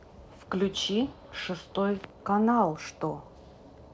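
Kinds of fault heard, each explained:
No faults detected; the speech passes through the call path with content ending at 8 kHz, consistent with a wideband G.722 link.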